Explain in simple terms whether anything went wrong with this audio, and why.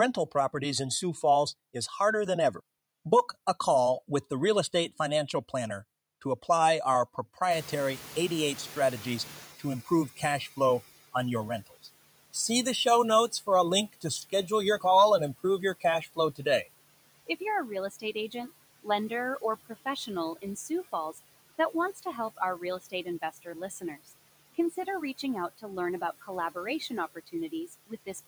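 Two things go wrong, both caused by the noise suppressor.

The first is the noise suppressor catching up. At about 7.5 s, just after "to apply our", the room noise gets much louder. The suppressor's picture of the background is still set for the quieter room, so for roughly 3.3 seconds the noise comes through with too little reduction. It then sinks gradually as the suppressor adjusts, settling by about 10.8 s, before "on your rentals".

The second is speech cut by the noise suppressor. Between about 17.91 s and 18.49 s, after "you're a real" and before "lender or professional in", the suppressor mistakes part of the speech for background noise and turns it down with the noise. For a fraction of a second the speech sounds swallowed and faint, because quiet sounds there are lowered along with the room noise.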